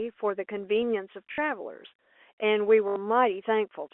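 At 1.32 s the speech breaks into a short robotic stutter lasting about 60 ms, and at 2.88 s a longer one of about 80 ms follows. Both are packet loss with the last packet repeated. Audio went missing and the receiver kept replaying the final segment it had. Each replay restarts out of step with the pitch, so the run buzzes, which fits 20 ms packets. The narrow telephone band of the G.711 line carries through both.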